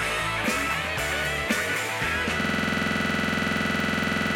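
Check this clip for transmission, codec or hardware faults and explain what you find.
There is one hardware fault. From 2.41 s to the end, a single 46.44 ms fragment repeats 42 times, giving a rapid mechanical stutter at 21.5 Hz. This is a system hang loop: the system froze while the sound device kept replaying its ring buffer, which fits a 2048-sample buffer.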